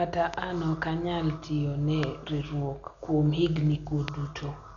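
Speech that sounds dull and band-limited throughout, with a rough, fluttering noise hanging around voiced tones. This is heavy Dolby Digital compression, likely from an AC-3 style encode at a very low bitrate, which fits roughly 48 kbps. The encoder narrows the band and the decoder fills the unfunded lines with noise. Three sharp loud pops, each a single hit about 20 dB above the speech, land at 0.34–0.36 s, 2.03–2.05 s and 4.08–4.10 s while the speech continues underneath. Each is likely a voltage step or glitch added to the signal.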